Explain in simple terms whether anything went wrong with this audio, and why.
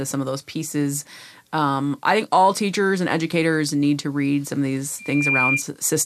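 Right after "read some of these", at 4.99 s, a piercing whistle near 2.4 kHz swells up within about a third of a second and rings until 5.64 s. That is loudspeaker feedback squeal: the microphone picked up its own loudspeaker, so that one pitch looped round and kept growing.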